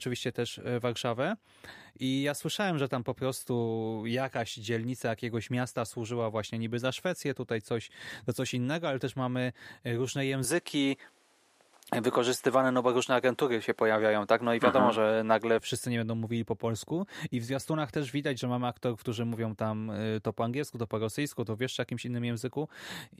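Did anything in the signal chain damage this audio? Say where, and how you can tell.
Yes. An input switched to a poorer device from 10.44 s to 15.59 s, just after "też mamy y różne", with full quality returning before "wszyscy nie będą mówili". The stage is most likely the capture device selection at the driver level. In that span the top end stops at 13 kHz, so the sound turns duller, the level shifts by a few decibels, and a new, faint noise floor appears well beneath the signal. Both changes happen with no gap at either transition.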